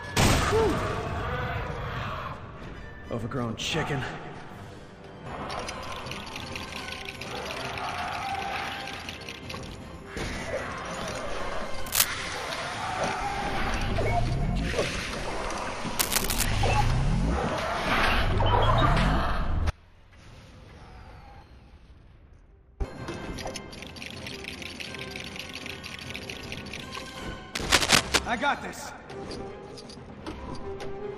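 Short bursts of scratchy, rustling noise cut across the sound at 11.86 to 12.08 s, 15.99 to 16.45 s and 27.55 to 28.19 s. The first two are roughly as loud as the sound itself, and the last is a little louder. This is cable scratch noise, likely from a worn cable, plug or control being moved so that its contact resistance jumps about rapidly and adds dense, ragged noise while it shifts. Between 19.70 and 22.80 s the sound abruptly drops away for about 3.1 s. It leaves only a faint trace far below normal level, roughly 30 dB down, and then snaps back mid-flow rather than fading. This is an audio dropout to a faint residue: the signal was likely lost at a break upstream, while the path after it stayed live and carried only that weak leak.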